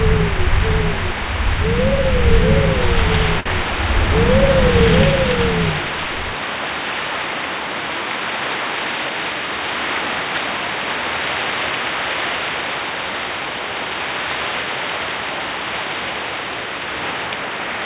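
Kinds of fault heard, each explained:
Short stall from a late packet: right around 3.4 s a packet shows up late, the jitter buffer runs dry, and the receiver just stretches whatever sound it last had for about 54 ms, up to 3.47 s, then picks up exactly where it left off. Nothing's actually lost, but that moment hangs a touch too long with a faint buzzy smear, and everything after sits 54 ms later. Above it all, the audio stops at 4 kHz, which fits a G.711 narrowband call path.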